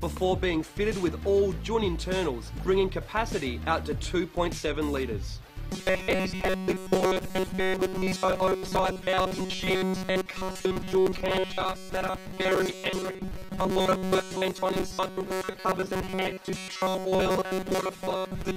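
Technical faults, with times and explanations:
5.73–18.57 s, robotic sound from repeated short buffers: the audio turns into a rigid metallic buzz fixed at 188 Hz that still loosely follows the underlying sound, likely because the same 5.3 ms block was replayed while most of the real audio was skipped. A steady pitch tied to the block length distinguishes it from ordinary dropouts.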